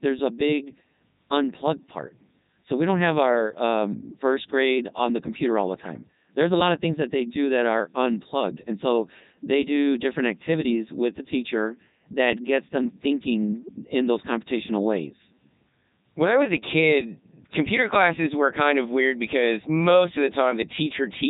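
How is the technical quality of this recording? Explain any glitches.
Technical quality is poor: the whole clip has gone through a Codec 2 vocoder, and it's heavily damaged. Codec 2 doesn't keep the waveform at all. It sends just pitch, voicing, energy and a rough spectral envelope, then rebuilds the speech from sine waves at the far end. That's why it sounds robotic and buzzy from start to finish, with nothing above 3.8 kHz. It's running in the top 3.2 kbit/s mode.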